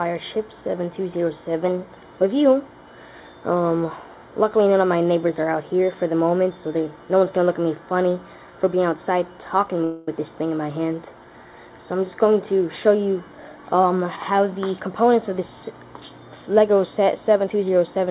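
From 9.84 to 10.08 s the sound stretches into a fading buzz for about 230 ms before resuming where it stopped: a call audio freeze, likely from delayed packets draining the jitter buffer. Between 13.36 and 14.89 s the audio runs hurried at unchanged pitch, about 115% speed. This is a jitter buffer speed-up, trimming roughly a fifth of a second of pitch periods to cut the delay. Throughout, the narrowband sound with nothing above 4 kHz fits a G.711 call path.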